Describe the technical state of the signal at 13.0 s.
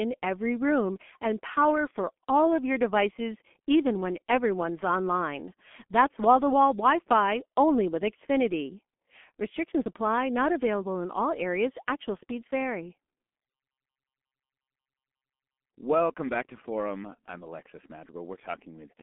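At 13.0 s, as throughout the clip, G.723.1 codec coding at a rate that points to about 6 kbit/s leaves speech muffled and hoarse, cut above 3.7 kHz, with consonants smeared rather than merely band-limited.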